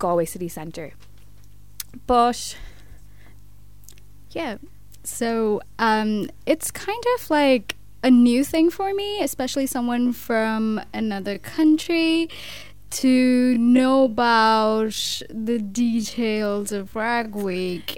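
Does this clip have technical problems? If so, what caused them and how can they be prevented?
Yes. From 9.92 s to the end, the sound slows abruptly to about 0.58 times its pace, a time-stretched section likely caused by software lengthening audio by repeating short pieces. Unlike slowed playback, the pitch stays unchanged. Prevent it by trimming or editing material to fit instead of stretching it.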